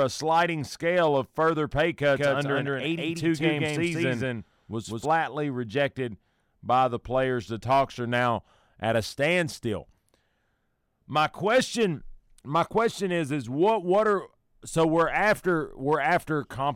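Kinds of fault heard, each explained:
Doubled audio track: from 2.15 to 5.05 s, between "scale of further pay" and "rejected by the players", a second full-band copy of the speech runs about 200 ms behind at roughly equal level, likely from an edit holding two copies out of step. Unlike reverb or echo, it has no decay or room colour and switches on and off abruptly.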